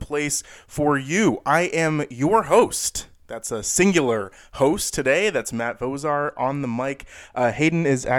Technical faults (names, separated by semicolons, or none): de-emphasis applied wrongly